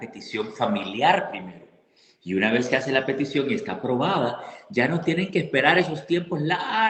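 No technical faults are audible.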